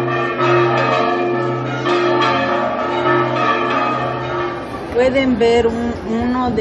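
No technical faults can be heard anywhere in this recording.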